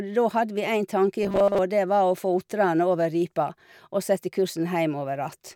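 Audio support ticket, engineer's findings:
Robotic sound from repeated short buffers, 1.23 to 1.59 s, speech goes rigid and metallic for about a third of a second. Fixed 200 Hz buzz riding on it, which fits a 5 ms chunk looping. Likely the playback buffer starving, so the last chunk gets replayed in place of most of the real audio over that stretch.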